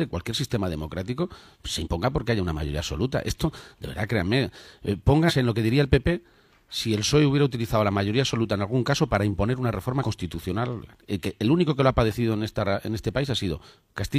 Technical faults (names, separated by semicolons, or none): damaged data in a compressed stream